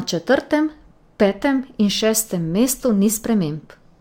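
From start to finish, the top of the speech sounds dulled, and a faint metallic shimmer rides on the sibilants. This is imaging from linear upsampling. The rate appears to have been raised by joining samples with straight lines, which fits a step from about 22 kHz up to 44.1 kHz. That crude interpolation filters poorly, so it softens the upper band and leaves a mirrored copy of the spectrum between about 11.0 kHz and 22.1 kHz, roughly 20 dB below the signal.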